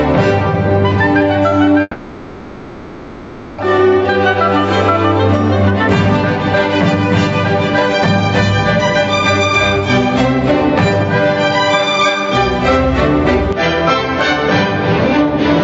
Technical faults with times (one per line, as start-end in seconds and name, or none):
0.00-15.63 gain pumping
1.81-3.64 long network dropout
13.53-15.63 input switched to a poorer device